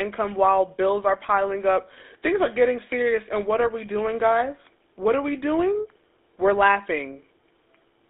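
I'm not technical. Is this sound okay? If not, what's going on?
No, not quite. The whole clip has been through the GSM full-rate codec, the system the earliest digital mobile phones used. It rebuilds speech from a rough model of the throat and mouth, driven by a coarse train of pulses, and that leaves a clearly audible buzzy, gravelly roughness on the speech. On top of that, only the band from about 300 Hz to 3.6 kHz gets through, so the sound is thin and boxy, missing both its low body and its crisp top.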